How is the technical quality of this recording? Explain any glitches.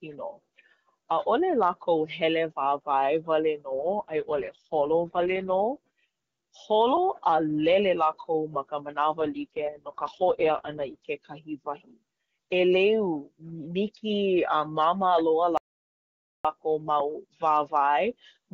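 The recording has two codec rate drops and one complete dropout; between them the wideband AMR-WB speech is clear, with at most faint coding artefacts.

AMR rate drop, 3.70 to 5.69 s (after "wāwae wale") and 9.20 to 11.08 s (after "lele lākou ma ka"): the network pushed the AMR-WB codec down to save bits for error protection. The roughness fits a fall from 23.85 to 6.6 kbit/s. The bandwidth stays, but the speech turns raspy and synthetic until the rate recovers.

Audio dropout to silence, 15.57 to 16.45 s: the input signal was lost for 0.87 s, likely through a broken link or disconnected device, and silence was written instead. The speech cuts off abruptly into dead silence with no room tone, and whatever was said there is gone.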